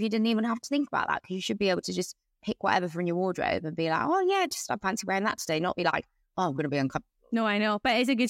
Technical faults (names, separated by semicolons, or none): none